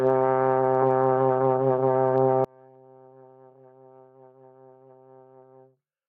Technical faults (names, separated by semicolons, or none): gain pumping; one channel inverted